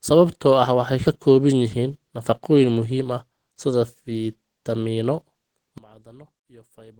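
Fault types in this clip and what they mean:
Opus compression: Throughout, the speech sounds hoarse and muffled, with a grainy, rough texture on voiced sounds that is plainly audible. The treble still extends to about 20.4 kHz, so the bandwidth is not narrowed. This is likely low-bitrate Opus coding in its hybrid mode, where a speech-style coder handles the lower band and band energies are filled approximately above it. The damage fits a rate of around 16 kbps.
One channel inverted: From 5.78 s to the end at about 7 s, the voice nearly collapses when the stereo is folded to mono. The level drops by about 24 dB, and only a faint residue remains. The likely cause is one channel flipped in polarity for that stretch, so the content shared by both channels cancels in the sum and only their small differences survive.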